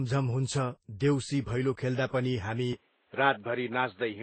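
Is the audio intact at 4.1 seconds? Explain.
No. From 2.73 s to the end, the speech narrows to nothing above 4.2 kHz with a faint new noise floor, likely an input switched to a poorer device, sounding dull and boxy at an unchanged level. Throughout, the combined artefacts of different codecs with nothing above 8.4 kHz point to transcoding between lossy codecs, likely MP3 followed by Vorbis, each adding its own damage.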